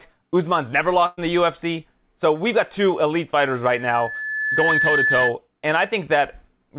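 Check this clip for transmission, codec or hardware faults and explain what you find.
Two faults stand out in the speech: a short dropout early on and a feedback squeal in the second half. Everything is band-limited to 4 kHz, as you'd expect from a G.711-style telephone path.

Burst of packet loss, 1.06 to 1.19 s: A run of packets never made it in time, so about 120 ms of speech is simply gone. The receiver papered over roughly 113 ms of it by stretching the last bit of sound it had and fading it down. You hear a brief held buzz or hiss, and then the talker jumps ahead with a chunk missing.

Loudspeaker feedback squeal, 3.65 to 5.35 s: Right after "got two elite fighters", a 1.7 kHz tone starts creeping in and swells over about a second until it sits around 5 dB above the speech. That's a mic hearing its own loudspeaker, with the loop gain tipping past one at that frequency and the tone feeding itself. 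It's a single piercing whistle riding over everything until the loop breaks.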